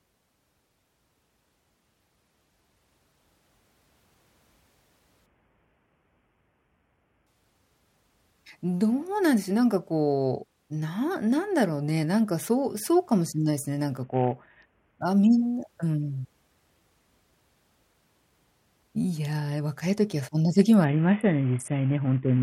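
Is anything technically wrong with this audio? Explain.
Yes. Three Bluetooth SBC bit pool drops occur, at 5.26–7.27 s, 14.03–15.01 s and 20.84 s to the end. The speech turns dull and gritty: starved of bits, upper sub-bands vanish and the rest are coarsely quantised, consistent with bit pool 31 falling to 5, about 50 kbps.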